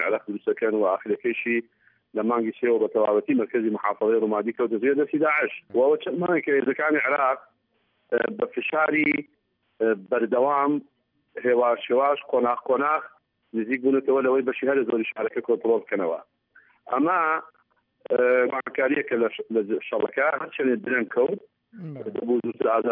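No technical faults can be heard anywhere in this audio.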